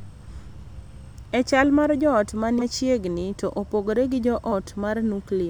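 Compressed frames were skipped, so the speech jumps ahead about 150 ms at 2.58–2.62 s and a fraction at 4.51 s.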